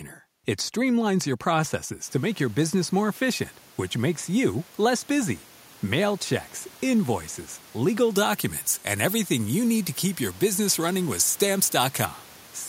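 From 8.10 s to 12.06 s, just after "checks invoices legal", the pre-emphasis was left on: the treble lift matching the FM 75 µs curve was applied, but the complementary de-emphasis never followed to cancel it. The speech is therefore tilted toward the top end, about 14 dB hotter at 10 kHz than at 1 kHz, so it turns thin, bright and hissy, with sibilants spitting forward. The room noise that rises around two seconds in sits well beneath it.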